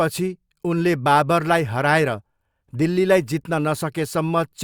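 No technical faults can be heard anywhere in the speech recording.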